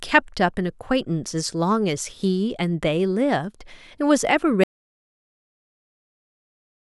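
At 4.64 s the speech cuts off abruptly into silence, with no room tone, and stays silent to the end. This is an audio dropout to silence, likely from the input being lost while the recorder kept writing silence, so anything spoken afterwards is gone.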